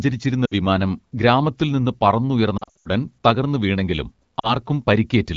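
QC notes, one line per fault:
0.46–0.53 s, 2.57–2.88 s, 4.39–4.55 s: lost AMR speech frames. The AMR-WB decoder repeats the last good pitch and vocal tract settings at falling gain, so single gaps warble and longer runs drop to near silence within two frames. The middle stretch, scattered gaps with an 80 ms longest run, sounds choppiest.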